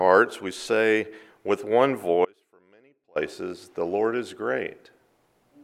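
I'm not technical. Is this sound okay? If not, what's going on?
No. From 2.25 s to 3.16 s there is an audio dropout to a faint residue: for just under a second the sound abruptly falls away, and only a very faint trace of it remains, far quieter than normal, before it cuts straight back in. The sharp start and stop mark this as a break in the signal rather than a natural pause or fade. The likely cause is a brief loss of the signal partway along its path while the rest of the chain kept running.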